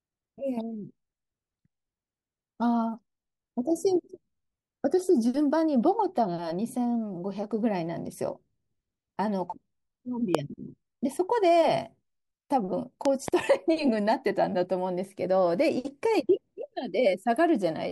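A sudden voltage pulse, likely from a plug, switch or static, enters the signal twice as a loud pop over the continuing speech: once at 10.35 to 10.37 s, roughly 20 dB above it, then as two pops from 13.05 to 13.30 s, around 15 dB above.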